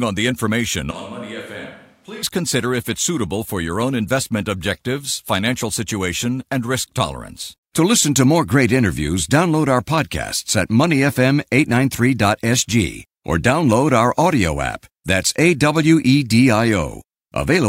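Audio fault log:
0.91–2.23 s, switch to a distant microphone: for just over a second the speech suddenly goes roomy and hollow, thins out in the low end, and drops by around 10 dB, with the room's background noise coming up to roughly 30 dB under the voice. The jump in and the jump back are both abrupt. That's likely the close mic's feed dropping out and a farther pickup, say a camera mic, filling the gap.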